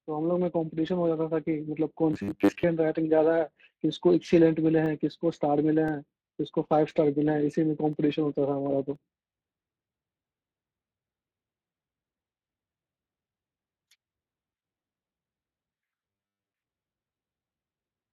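The speech carries Speex codec damage throughout. This CELP coder has too few bits for the excitation, so the sound turns plainly noisy and hoarse. Nothing is present above 15.1 kHz. The coding points to a rate near 22 kbps.

From 2.13 to 2.63 s, the speech turns into a rigid, metallic buzz at 100 Hz. This is robotic sound from repeated short buffers, likely caused by a 10 ms block being replayed. Most of the real audio in that span is skipped.

From 4.86 to 11.0 s come periodic USB or driver dropouts. About every 1.024 s, something blocks the audio path. Roughly a millisecond of sound is replaced by silence each time. About seven short, evenly spaced ticks result.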